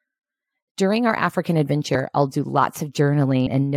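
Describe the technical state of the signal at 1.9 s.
At 1.94 s, just before "I'll do", the speech jumps forward by about 150 ms because compressed frames are skipped. That gap points to roughly seven lost frames of about 21 ms each.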